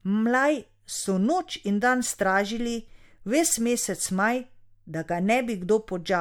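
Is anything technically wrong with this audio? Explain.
Yes, the speech shows generation loss throughout: swirly, hollow and smeared, with blurred attacks, likely from re-encoding to MP3 at around 98 kbit/s roughly five times, compounding quantisation noise.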